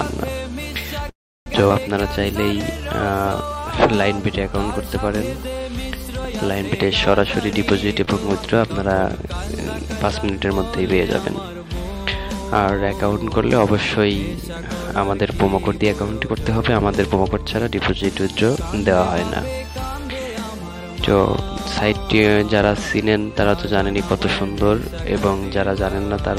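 Real-time call audio with several jitter-buffer faults. From 1.09 to 1.48 s a call audio freeze holds playback for about 370 ms, mostly silence, with the sound fading out. It then resumes where it stopped, likely because delayed packets drained the buffer. At 1.68–1.72 s a skip ahead drops roughly 150 ms, so the audio jumps forward almost seamlessly. A jitter buffer slow-down from 2.54 to 3.72 s plays at 89% speed, repeating pitch periods to add 141 ms and drawing sounds out at the same pitch. A jitter buffer speed-up runs at 108% from 7.41 to 8.05 s, trimming about 50 ms. At 8.05–8.09 s a short stall from a late packet stretches the preceding sound by 23 ms before playback continues. A second speed-up, 15.57–18.58 s at 111%, removes about 300 ms and sounds hurried.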